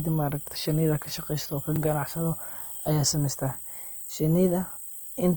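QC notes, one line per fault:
throughout, Opus compression: the speech has a grainy, rough texture, with tonal parts of the voice turning noisy rather than swirling. Full bandwidth is kept up to about 20.3 kHz. The likely cause is Opus music-mode coding at a rate that fits about 24 kbps.
0.48 s, 1.76 s, 4.00 s, repeated buffer: at each point a 40 ms stretch plays twice, with a hard join, heard as a brief stutter. New audio arrived late and the last block was replayed, which fits a 40 ms playback buffer. The timing then resumes with essentially nothing skipped.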